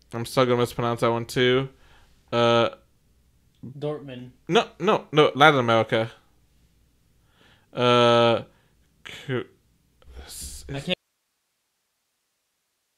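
At 10.94 s the speech cuts off abruptly, with no fade or natural pause, and from there to the end only a faint hiss remains, roughly 55 dB below the level of the speech. This is an audio dropout to a faint residue: the wanted signal was likely lost somewhere upstream while the rest of the chain stayed live, so its own noise floor carries on after the break and the speech never returns.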